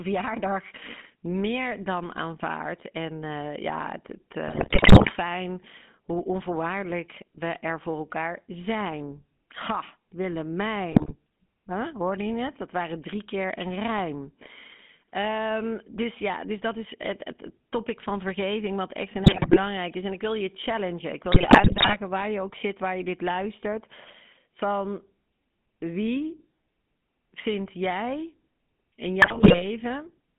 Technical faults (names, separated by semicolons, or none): GSM full-rate codec; GSM bit errors